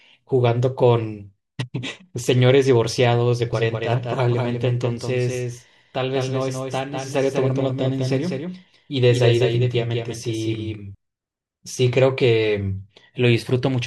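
From 3.53 to 10.95 s there's a doubled audio track: a dry copy trails roughly 200 ms behind, about 5 dB down, likely a second capture path running late.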